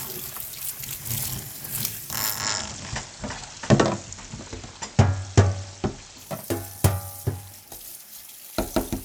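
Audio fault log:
2.26–6.36 s, digital radio blending to analogue: steady hiss rises well below the sound, and level shifts about 2 dB, each change easing in over roughly 0.19 s as the receiver cross-fades from lost digital reception to FM and back.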